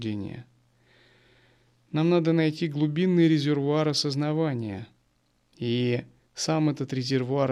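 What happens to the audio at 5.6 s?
Nothing goes wrong at 5.6 s: the speech continues intact through that moment, with no dropout, click or distortion to be heard.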